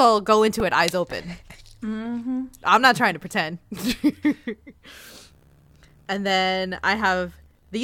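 At 0.60 s, a repeated buffer: a tiny segment replays several times, fitting a 64-sample buffer, producing a brief buzz; the waveform shows identical short cycles, the spectrogram a thin vertical streak.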